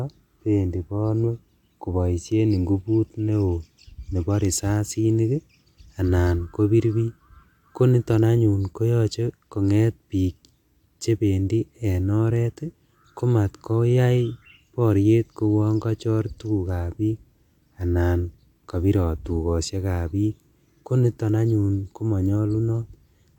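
No technical faults are audible.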